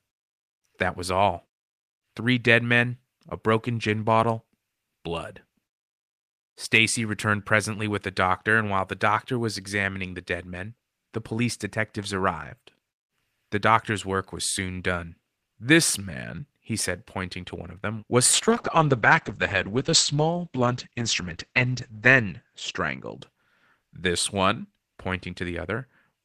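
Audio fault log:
18.33–23.47 s, call bitrate drop: partway through this speech the encoder is clearly told to spend far fewer bits, so the sound goes rough and watery and loses its top end, with the band closing down to about 8 kHz. It stays at its worst for roughly 3.8 s, which fits a fall from around 32 kbps to something near 9 kbps in the Opus call path, before the bitrate climbs back and the brightness returns.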